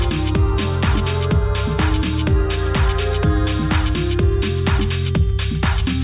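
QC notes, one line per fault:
No faults found. Nothing in the audio calls for a QC note.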